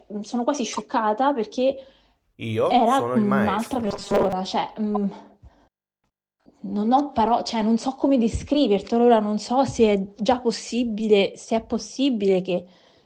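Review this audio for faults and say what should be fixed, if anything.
There are two corrupt frame decoded glitches. The first runs from 0.73 to 0.81 s and the second is short, around 4.95 to 4.97 s. In each one the decoder played a compressed frame with flipped bits, so misread gains and codes put energy at the wrong frequencies and you get a chirpy burst. The first spans a few frames and the second just one. To prevent this, add checksums and have the decoder conceal bad frames rather than play them.

From 3.86 to 4.33 s the sound turns into a rigid, metallic buzz at 200 Hz. That's robotic sound from repeated short buffers. The likely cause is new audio not arriving in time, so the software kept looping the last slice while skipping the real material, and most of this stretch is repeats. A 200 Hz buzz fits a repeated piece about 5 ms long. To prevent this, make sure the buffer is kept fed, with enough headroom and priority for the audio thread.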